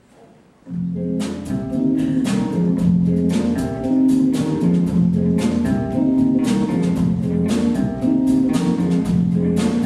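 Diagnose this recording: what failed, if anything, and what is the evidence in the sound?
No fault detected anywhere.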